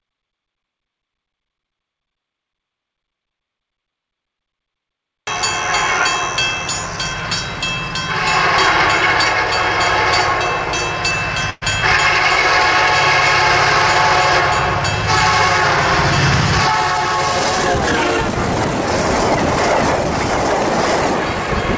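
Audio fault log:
11.50–11.63 s, burst of packet loss: a run of packets went missing or arrived too late, so the receiver extended the last sound it had for about 115 ms, fading it as the gap went on, then left about 10 ms of silence. About 120 ms of the original never plays, so the sound jumps ahead on resuming. The filled stretch shares the call's band limit, nothing above 8 kHz, which fits a G.722 wideband codec.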